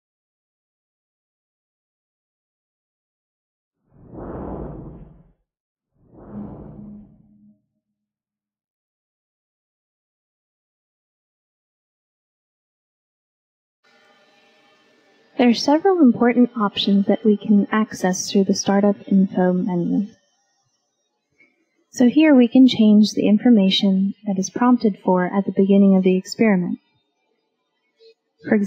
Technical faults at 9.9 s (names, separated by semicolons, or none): none